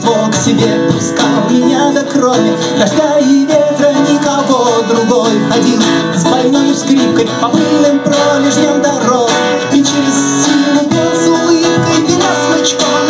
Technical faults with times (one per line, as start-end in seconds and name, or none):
0.00-13.09 gain pumping